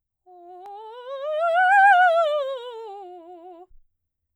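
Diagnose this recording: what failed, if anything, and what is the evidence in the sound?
Nothing failed: the music carries no audible fault at any stage of the chain.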